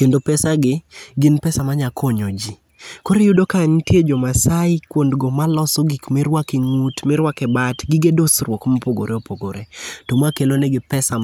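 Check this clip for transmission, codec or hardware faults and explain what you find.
Nothing in this speech clip points to a transmission, codec or hardware fault.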